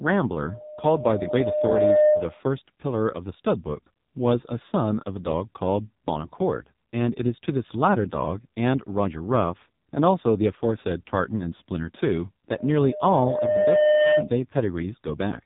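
From the start the speech has gone through the AMR narrowband mobile codec, and it's taken a beating. Everything above about 3.8 kHz is simply gone, so it sounds boxed in and telephone-thin. The vocal-tract model is clearly starved of bits: the voice comes out buzzy and synthetic, which points to one of the lowest AMR-NB modes, something like 5.9 kbps. The damage is heavy and carries right through the 15-second clip.

Then at 12.58 s a loudspeaker feedback squeal starts. A mic is hearing the speaker it feeds, and the loop gain has tipped past one at 606 Hz. That single tone swells over roughly a second and a half until it sits a few dB above the speech. It hangs there as a steady howl and stops at 14.30 s.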